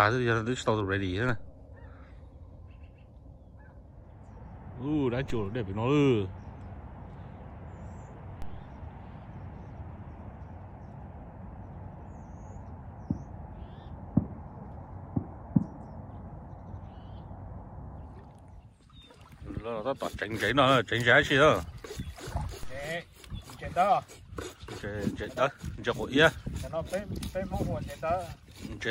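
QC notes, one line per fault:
1.29 s, 5.3 s, 8.42 s and 22.63 s: DC step. The waveform's zero line jumps abruptly by about -27 dBFS at the first two and about -29 dBFS at the last two, heard as a brief low thump. Each offset then drains away through a roughly 2 Hz high-pass while the sound continues unchanged.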